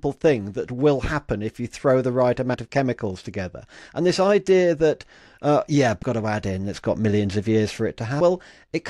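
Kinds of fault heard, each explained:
compressed frames skipped: Whole compressed frames never reach the output, so the audio jumps forward by a multiple of the frame length, about 23.2 ms here. After "you throw the right" at about 2.53 s roughly a tenth of a second vanishes before "of chemicals together". After "idea that uh yeah" at 6.02 s, and again at 8.20 s, roughly 0.3 s is skipped.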